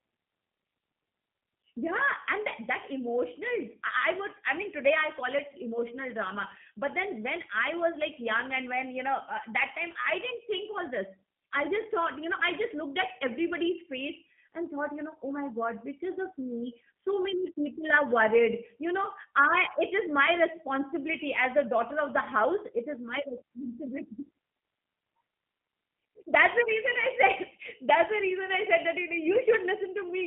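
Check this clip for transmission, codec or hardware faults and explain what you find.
The speech has been through a G.729 codec for its full length. It rebuilds the audio at a rate that fits 8 kbit/s, modelling each 10 ms frame with a vocal tract filter, pitch predictor and a few pulses, so it sounds rough and synthetic, band-limited to about 150 Hz to 3.4 kHz, with nothing above 3.5 kHz.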